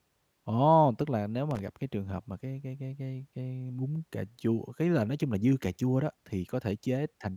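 At 1.51 s, right after "là nếu" and before "gặp cái trường hợp", the speech breaks into loose connector crackle lasting about 80 ms, to 1.59 s. A worn or dirty contact is making and breaking in quick succession, so the signal is chopped on and off, heard as a brief scratchy rasp. On a waveform it shows as jagged dropouts and spikes; a spectrogram shows ragged broadband vertical streaks.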